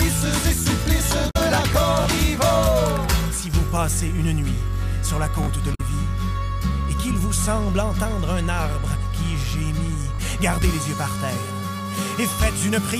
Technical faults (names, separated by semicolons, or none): damaged data in a compressed stream; repeated buffer